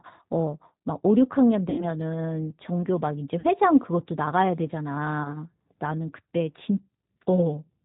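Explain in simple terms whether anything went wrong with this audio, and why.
The whole clip passes through the G.729 codec, a low-rate phone codec that rebuilds the voice from a simple model. Everything above 4 kHz is missing, and the speech sounds slightly rough and synthetic.

There is also VoIP packet loss concealed by the speech codec at 1.70–1.87 s, 3.40–3.46 s, 5.23–5.33 s and 7.18–7.22 s. The decoder filled the missing 80, 40, 20 and 20 ms stretches by guessing from the last sound, giving a brief buzzy or noisy, fading smear rather than a clean silent dropout.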